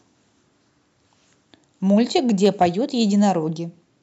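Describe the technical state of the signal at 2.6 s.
Hard clipping runs from 2.44 to 2.66 s. The speech overdrives a stage by about 4 dB, so its peaks are cut flat, giving crackle on the peaks.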